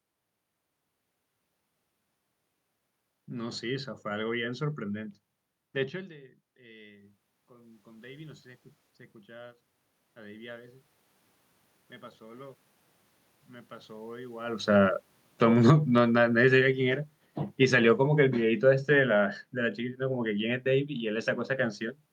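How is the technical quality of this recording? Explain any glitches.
The recording has level problems from automatic gain control working against changes in the talker's distance, twice pushing the level up and once pulling it down.

Automatic gain rising occurs from 4.92 to 10.78 s and again from 12.18 to 14.5 s. Around 6 s the talker moves away and the input drops by about 23 dB. The gain control then climbs by about 11 dB over nearly six seconds, and later by about 4 dB. Unlike a talker simply coming closer, the room noise swells along with the voice.

Automatic gain falling runs from 14.62 to 20.97 s. The talker moves around 14.5 s, and the sound starts loud and then sinks by about 11 dB as the gain control pulls back. The room noise sinks with the voice, which shows a gain change rather than movement.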